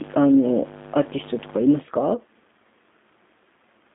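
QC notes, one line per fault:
throughout, G.729 codec: nothing above 3.7 kHz, and the speech has a rough, synthetic edge from being rebuilt out of pulses and a filter, which fits 8 kbit/s VoIP.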